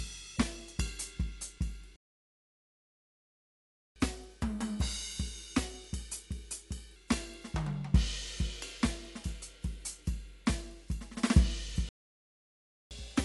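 Music throughout sounds dull and veiled, with nothing above 11.4 kHz and a rough, fluttering haze clinging to sustained tones. This is likely Dolby Digital compression at a starved bitrate; the damage fits roughly 64 kbps. At that rate the encoder narrows the band and gives many frequency lines no mantissa bits, so the decoder fills them with dither noise, which produces the grainy shimmer around the tones. The music cuts out abruptly at 1.96 s and stays silent for 2 s, until 3.96 s, then again from 11.89 s to 12.91 s, a gap of about one second. These are playback stalls, most likely the player running dry of data or having its thread blocked, so output halts until it recovers and then resumes where it stopped. Right after each gap the music rushes and rises in pitch. From 3.96 s to 6.96 s it plays at 1.1 times normal speed, about a semitone and a half sharp, then settles back. From 12.91 s to the end it runs at 1.15 times speed, about two semitones sharp. 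This is catch-up at higher speed: the player resamples its backlog faster to recover the time lost in the stall, so tempo and pitch climb together.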